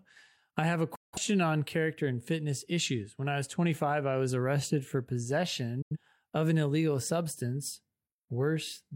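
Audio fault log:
0.95–1.18 s and 5.82–5.97 s: digital broadcast dropout. The speech fades out in about 8 ms and goes silent, because the receiver muted on corrupt or missing frames. The gaps fit roughly four and two lost frames, so that speech is gone.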